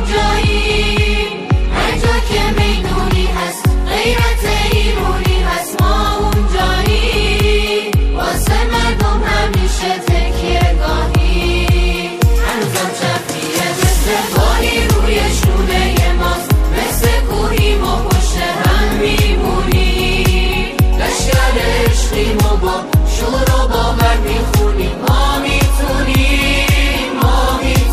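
From 8.90 to 11.28 s the sound turns slightly dull, a sign of channel delay (comb filtering). One channel runs late by a tiny fraction of a millisecond, which fits a one-sample offset, and summing to mono cancels the shared content near the very top of the band, with the first notch around 20 kHz. Unlike a flanger, the notch stays fixed. Unlike a low-pass filter, the loss comes from cancellation at evenly spaced frequencies, not a smooth rolloff.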